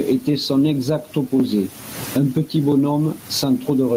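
Gain pumping runs through the whole speech clip: loud and soft parts end up closer in level and the sound is squashed, with the level swinging by around 20 dB. The likely cause is input gain set far too high, with a fast limiter clamping it down.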